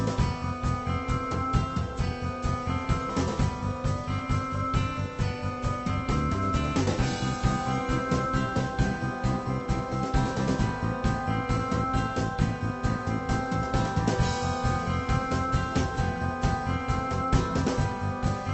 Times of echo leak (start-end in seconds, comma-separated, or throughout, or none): none